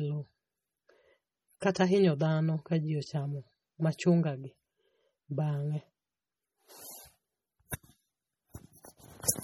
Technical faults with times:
0.00-9.44 MP3 compression
1.75 pre-echo

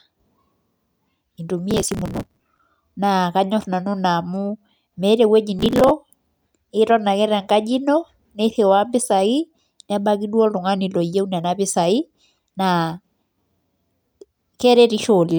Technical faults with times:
1.71-2.60 processor overload crackle
5.59-5.91 processor overload crackle

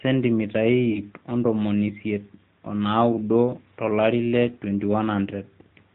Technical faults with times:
0.00-5.94 AMR narrowband mobile codec
0.92-1.03 lost AMR speech frames
3.12-3.20 lost AMR speech frames

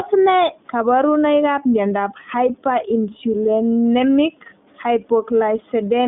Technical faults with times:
0.00-6.07 iLBC codec

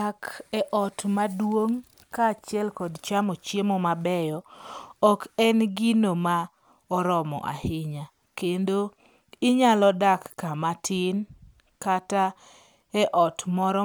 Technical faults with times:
none

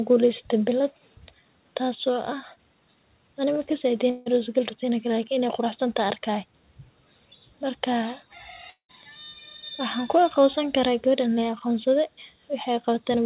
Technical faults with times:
4.10-4.28 long network dropout
8.70-8.91 long network dropout

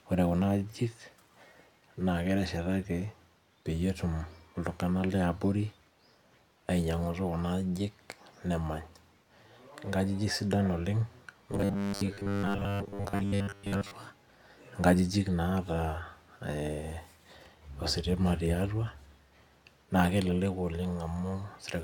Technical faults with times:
11.52-13.93 robotic sound from repeated short buffers

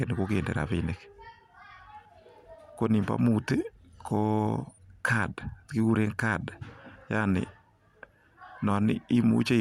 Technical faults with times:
none

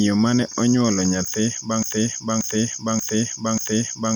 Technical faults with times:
1.83-4.16 broken-record loop

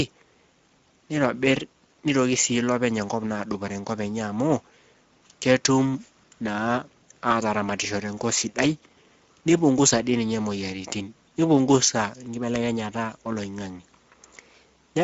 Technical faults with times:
0.00-15.04 Speex codec

